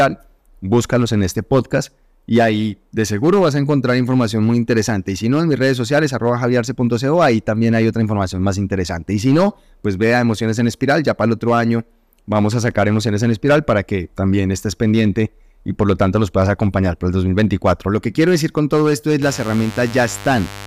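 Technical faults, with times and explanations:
Throughout, hard clipping: peaks are driven about 7 dB past the limit and sliced flat on a small fraction of samples. The waveform shows squared-off tops, and the spectrogram shows bright high-frequency splashes that sound like crackle.
19.22–20.66 s, mains buzz: after "con todo esto es" a raspy 50 Hz buzz enters, about 15 dB below the speech. The spectrogram shows evenly spaced horizontal harmonic lines reaching several kHz.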